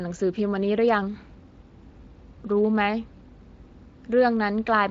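No technical faults can be heard in this speech recording.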